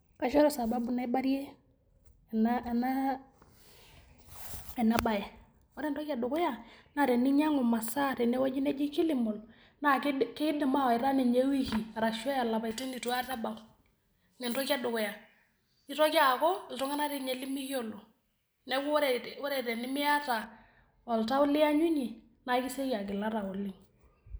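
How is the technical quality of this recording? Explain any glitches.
There's one clear problem, in the middle stretch. From 12.71 to 20.44 s you've got pre-emphasis left on: the treble lift, following a J.17-style curve, never got its matching de-emphasis, so 10 kHz sits about 11 dB hot relative to 1 kHz. The speech turns thin, bright and hissy on the sibilants.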